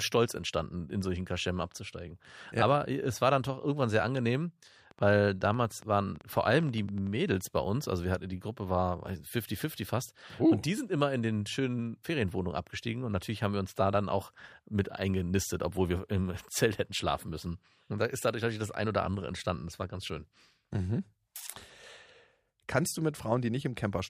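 From 4.91 to 7.08 s, a train of clicks ticks over the speech, about 10.7 per second, unevenly spaced and roughly as loud as the voice. Interference is the likely cause.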